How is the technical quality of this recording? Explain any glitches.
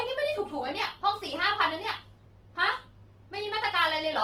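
The recording is noticeably compressed for its whole length. The speech comes through, but there's plainly audible codec damage.

The fault is Opus compression, and it's there from start to finish. The speech sounds grainy and rough, with a noisy texture rather than swirly holes. That's likely Opus running in its music mode at a very low rate, which fits something around 16 kbps. It keeps each band's energy but runs short of bits, so it fills bands with folded or noise-like content. The bandwidth stays wide, with content up to about 20.1 kHz, so the damage is graininess rather than muffling.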